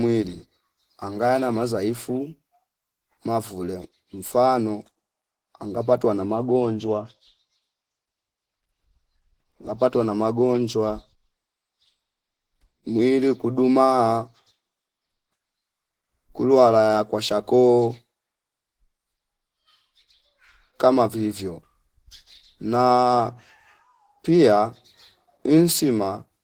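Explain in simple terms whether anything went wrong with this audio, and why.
Something did go wrong, across the whole clip. The speech sounds hoarse, grainy and muffled from start to finish. This is likely Opus compression squeezing the sound hard. It switches to a speech-friendly setting and fills in missing detail with noise.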